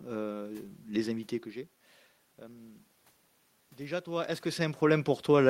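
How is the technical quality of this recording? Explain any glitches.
The speech has a timing problem that runs through the whole clip, heard as small, unevenly spaced hiccups in the pacing.

Clock drift between sender and receiver, throughout: the sender's clock runs about 3% slow, so the receiver's buffer keeps draining and must be topped up with repeated material.

Repeated timing corrections, from 0.08 s to 5.37 s: the receiver repeatedly repeats short slices, stretching playback to 97% speed and adding roughly a fifth of a second overall, heard as slight stumbles and an unsteady tempo.

Background room noise is audible, and the level shifts near 1 s and 4 s come from the talker moving relative to the microphone, not from the system.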